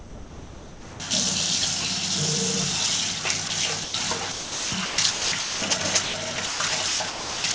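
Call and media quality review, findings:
Sound dropped by the voice detector at 0.0–1.0 s, 3.48–3.50 s and 3.84–3.94 s: sound swapped for steady comfort noise, likely the sender's VAD taking it for background and pausing transmission.

Sound chopped by the voice detector at 4.32–5.62 s and 6.04 s to the end: choppy, about 0.94 s and 0.81 s filled, likely VAD toggling send on and off. Band tops out near 8 kHz.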